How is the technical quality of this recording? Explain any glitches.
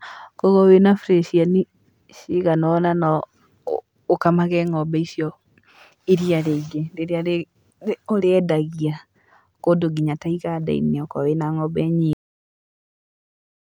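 There's one clear glitch, a cut-off end. At about 12.13 s the speech just stops mid-sound and drops straight into dead digital silence, with no natural decay. That's the final stretch of buffers never getting written out, so the tail of the recording simply isn't there.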